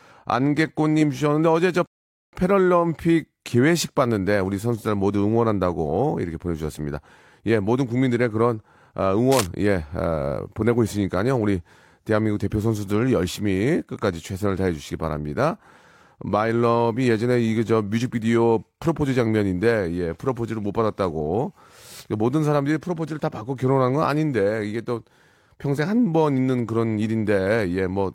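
At 1.86 s there's a rebuffering stall: playback ran dry and the speech just drops to silence until 2.33 s, then picks up exactly where it left off. Nothing's missing; you simply get an extra half-second or so of dead air.

Then from 9.31 to 9.47 s, a brief burst of cable scratch noise rides over the speech, a rough, crackly rustle only a little quieter than the talking itself. That's likely a worn cable or connector being nudged, its contact flickering for an instant.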